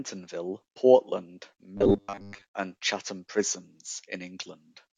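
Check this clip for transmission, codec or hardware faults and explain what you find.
One fault: robotic sound from repeated short buffers, 1.77 to 2.44 s. Audio likely arrived too seldom, so a roughly 10 ms chunk was looped while most real audio was skipped. The loop forces a fixed 100 Hz buzz, making the speech rigid and metallic, still loosely following it.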